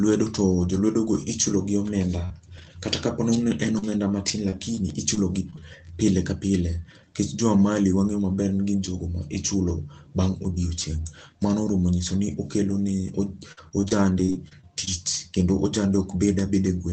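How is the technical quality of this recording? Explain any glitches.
The speech comes through a call link (Opus, band-limited to around 8 kHz, which fits roughly 24 kbps) and shows four kinds of packet-loss damage, clustered early on and near the end.

At 2.25–2.32 s there is a brief smear where about 40 ms of audio is missing. This is short concealed packet loss: the packet arrived too late, so the decoder stretched the preceding sound across the hole and then blended back into the real signal.

At 2.58–2.60 s and 2.62–2.64 s, two 20 ms moments turn rougher and noisier, with no gap. Each is a lost packet rebuilt from error correction: the following packet carried a low-bitrate backup copy, and the decoder played that copy instead of the missing original.

Between 3.35 s, after "ka po", and 5.61 s, before "pile ka", the speech picks up about seven small ticks and hiccups, none longer than about 30 ms. 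These are scattered short gaps, isolated lost packets, each patched by continuing the last sound.

From 12.70 to 15.21 s the speech turns choppy and robotic, with pieces dropping out. This is repeated packet loss: nine gaps in a row, the longest 48 ms, with about 8% of the stretch synthesized. Each patch is followed soon after by the next hole.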